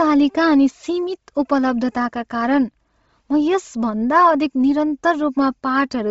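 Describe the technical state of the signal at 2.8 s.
At 2.8 s the speech carries Bluetooth LC3 compression damage, present throughout the clip. Nothing sounds above 7.7 kHz, and the top is grainy and breathy. The likely cause is heavy transform coding, consistent with about 24 kbps and 7.5 ms frames.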